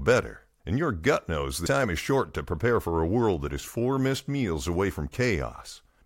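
Damaged data in a compressed stream produces a brief glitch at 1.65 s in this speech recording, between "your gut knows" and "time is short to". Corrupted bytes there break the decoder's frame sync, so it misreads the data and searches for the next valid header.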